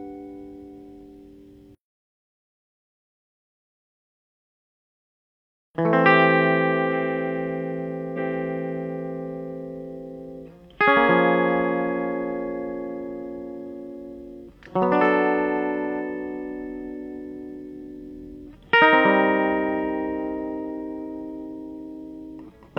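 At 8.13 s the streaming player fetched or queued the same segment of music a second time, so the stream jumps backwards and replays it. This is a stream segment repeated fault: from 8.13 s to 9.11 s, roughly 0.98 s of music that has already played comes round again before the programme moves on. The seam where playback leaps back is marked by a small blip, after which the passage sounds like a brief stutter in the arrangement.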